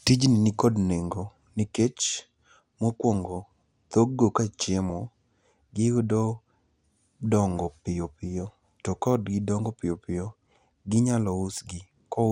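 Across the whole speech recording the sound is dull and granular, with a gurgling roughness in the upper range. Upper frequency bands drop out and return, and the bands that remain carry coarse quantisation noise. This is most likely MP2 compression at a low bitrate, in the region of 80 kbps. The damage is steady and evenly spread through the speech, which separates it from reception faults. Those come and go in short bursts rather than colouring everything.

At 4.90 s there is a brief watery blip: DAB burbling. Bit errors slipped past the error correction and corrupted sample values. For an instant, single sub-bands carry short bursts of noise, which sound like a few watery blips laid over the speech. Its shortness points to a couple of damaged frames and a very low error rate, a small fraction of a percent. It is a sudden isolated event, unlike the constant dullness of the compression.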